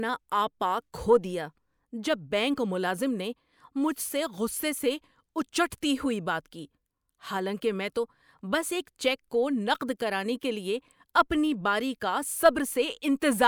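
No technical faults can be heard anywhere in this speech recording. There is nothing to place in time order, as no moment in the audio stands out as a fault.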